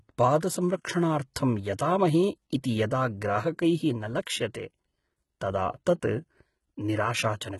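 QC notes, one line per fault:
Throughout, HE-AAC compression: nothing comes through above about 11.8 kHz, and the treble that is there sounds rebuilt rather than real. The s sounds come out gritty and lispy, with a metallic sheen on top of the speech. That's likely HE-AAC at a very low rate, something near 16 kbps judging by how heavy the damage is. Only the lower band gets coded properly. The top is copied up from below and roughly shaped, so its harmonics don't line up with the body of the sound.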